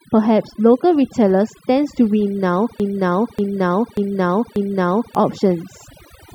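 A speech recording in which the background is pulled down and broken up into twinkling specks. That points to overdone noise removal: the reduction was set so hard that frequency bands close to the noise estimate were cut away along with the quieter parts of the voice. From 2.80 to 5.15 s, a fragment of about 0.59 s plays four times back to back, exactly the same each time, and whatever should have been heard in that stretch is gone. This broken-record loop is likely the result of the player, encoder or stream stalling and resending the last piece it held.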